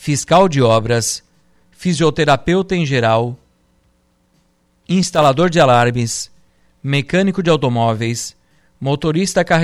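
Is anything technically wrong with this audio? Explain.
Yes. From 5.15 to 5.26 s the speech is broken by loose connector crackle, an irregular burst of scratchy clicks lasting about 0.12 s. A worn or dirty contact in the cable path is making and breaking as it shifts, so the signal keeps cutting in and out, and any DC offset on the line turns each break into a pop. On a waveform this shows as jagged dropouts and spikes. A spectrogram shows ragged vertical broadband streaks.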